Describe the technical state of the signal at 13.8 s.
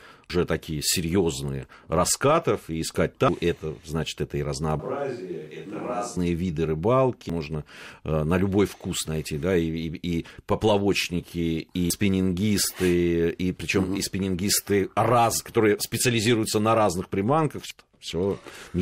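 At 13.8 s the signal is intact, with no audible fault at that moment.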